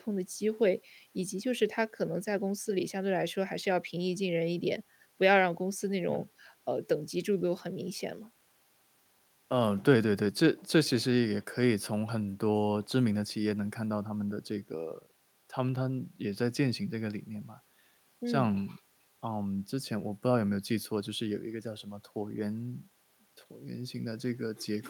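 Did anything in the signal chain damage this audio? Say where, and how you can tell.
No, nothing in the chain damaged this speech recording. There is no sign of harm at any stage, from capture through to playback.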